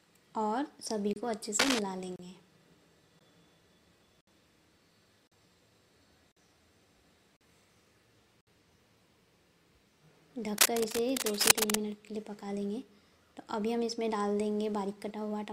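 Gaps between stream segments open at 1.13, 2.16, 3.19, 4.21, 5.27, 6.32, 7.37 and 8.41 s. These are hard-edged silences of 15 to 65 ms that arrive about once per second, where mismatched segment timestamps leave holes the player fills with silence. Between the first two gaps, from 1.59 to 1.79 s, dense uneven scratching rides a few dB above the sound. This is cable scratch noise, likely from a worn connector or cable shifting. It returns for longer, from 10.58 to 11.76 s.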